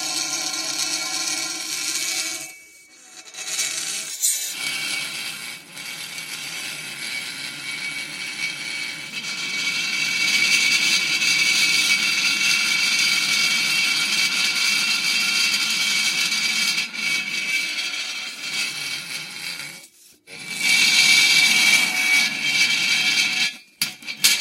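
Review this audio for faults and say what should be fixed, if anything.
Dropped samples at 10.39 s and 14.36 s: each is a sharp click, likely where a fraction of a millisecond went missing and the waveform jumped ahead. To prevent it, give the capture or playback buffer more headroom so no samples are skipped.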